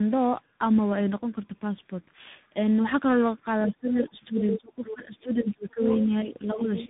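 Speech that sounds rough, muffled and warbly throughout, with nothing above 3.8 kHz: tandem speech coding, where three speech codecs in a row each re-encode the previous one's degraded output, which fits a Bluetooth-style CVSD link bridged through a low-rate mobile codec. From 3.67 to 5.81 s, and again from 6.05 to 6.69 s, the talker dips, by up to roughly 20 dB and then about 10 dB, likely speech suppressed in double talk as an echo canceller ducks both voices. A second voice breaks through at 4.38–4.6, 4.84–4.95, 5.27–5.35, 5.82–6.06, 6.31–6.59 and 6.77–6.87 s, ranging from faint to fairly close in level to the main talker, likely the other side's voice leaking through from the loudspeaker past incomplete echo cancellation.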